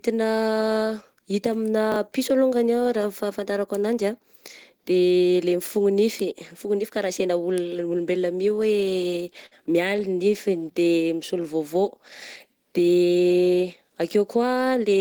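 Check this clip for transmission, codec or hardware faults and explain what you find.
Four faults can be heard in this speech clip, all of them transmission faults.

At 1.92 to 1.96 s, just before "piso alongany ah raha", there are chunks out of order. One 20 ms chunk arrived a chunk late and plays after the piece that should follow it. Nothing is lost. The order is wrong, though, and the swapped pieces meet at hard joins. You hear a brief jumbled blip.

From 8.27 to 9.54 s, right after "ka raha sena olona", there are repeated stalls, a stutter. Packets kept arriving too late, so the jitter buffer ran dry eleven times. Each time the receiver stretched the last sound to cover the wait. The longest wait was 53 ms. About 145 ms was filled this way, roughly 11% of the stretch, and nothing is missing. The speech drags and hiccups.

From 10.14 to 11.43 s there is a jitter buffer slow-down. The buffer needed more in reserve, so the receiver repeated single pitch periods and bits of pauses again and again. 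That added 118 ms. Playback ran at about 91% speed with the pitch unchanged. Sounds come out drawn out and slightly sluggish.

From 13.49 to 14.73 s there is a jitter buffer speed-up. The buffer was holding more audio than it aims for. To cut the delay, the receiver snipped out short pitch-period pieces many times over. It removed about a tenth of a second in total. Playback ran at about 107% speed at the same pitch. The speech sounds hurried here.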